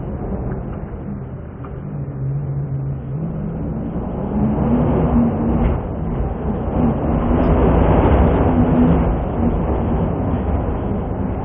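No technical faults can be heard at any point in the sound.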